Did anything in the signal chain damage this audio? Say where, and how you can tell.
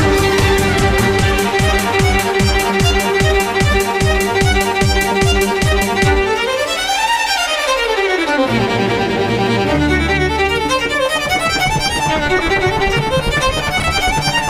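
Yes. At 13.80 to 13.84 s, two 20 ms chunks play in swapped order, one arriving a chunk late, at the driver or buffer stage. Chunks out of order leave nothing missing or repeated, unlike a dropout, but produce a brief jumble at the hard joins.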